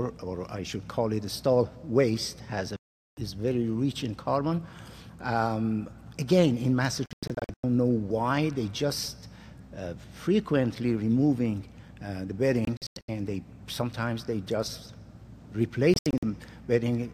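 The audio has digital broadcast dropouts: the receiver lost good frames and muted. There's one solid 0.41 s hole at 2.76 s, then scattered holes at 7.06–7.64 s, 12.65–13.09 s and 15.94–16.23 s.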